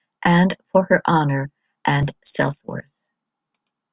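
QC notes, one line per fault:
No faults heard on this speech clip; nothing to log.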